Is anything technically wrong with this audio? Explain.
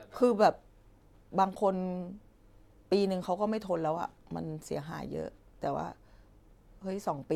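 No, nothing technically wrong turns up anywhere in this speech recording.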